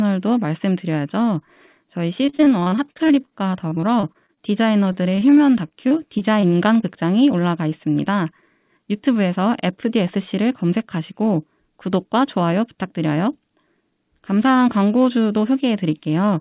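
From 2.26 to 6.84 s the speech turns choppy and robotic, with dozens of short holes up to 37 ms: repeated packet loss, each gap patched by stretching the preceding sound. Between 8.78 and 9.68 s it sounds briefly hurried at unchanged pitch: a jitter buffer speed-up running at 108%, trimming roughly 70 ms of pitch periods to shed backlog. Throughout, the sound stops at 4 kHz, which fits a G.711 mu-law call path at 64 kbps.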